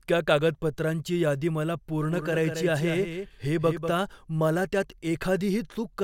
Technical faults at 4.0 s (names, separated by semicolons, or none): doubled audio track